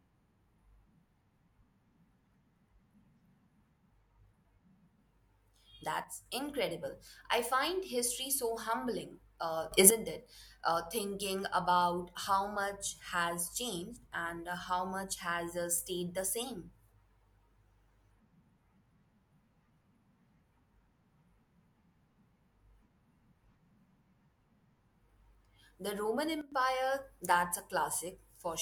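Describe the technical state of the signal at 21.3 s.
At 21.3 s the speech signal is intact, with no audible fault at that moment.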